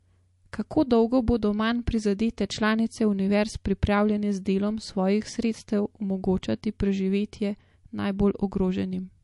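Throughout the speech, likely MP3 compression at a low bitrate, one that fits about 48 kbps, starves the encoder of bits. It drops weak frequency lines frame by frame, leaving a plainly audible watery swirl, metallic chirps on s sounds and smeared onsets.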